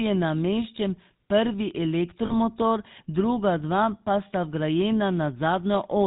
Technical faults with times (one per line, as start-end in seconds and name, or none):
0.00-6.07 GSM full-rate codec
2.26-2.32 lost GSM frames